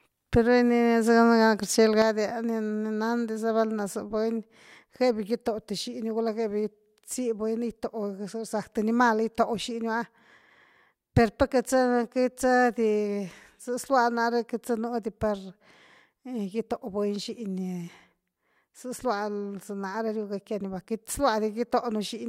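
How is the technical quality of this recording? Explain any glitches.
The recording has one fault. From 2.02 s to the end, the speech level falls abruptly by about 6 dB and stays lower. The likely cause is one channel dropping out, which halves the level of the summed mono sound.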